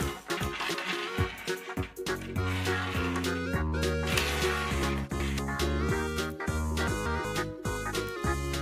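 Chunks out of order: a block of roughly 186 ms was delivered late and played after the blocks meant to follow it, two blocks late at 0.37–0.93 s and 4.83–5.39 s, one block late at 6.87–7.25 s. Each spot sounds briefly jumbled.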